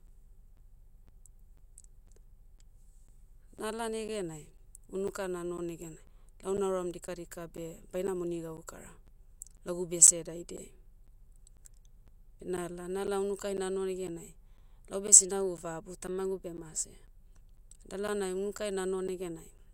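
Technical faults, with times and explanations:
0.07–19.59 s, periodic USB or driver dropouts: every 0.5 s, about 10 ms of audio is blanked to silence, heard as regular ticks over the speech.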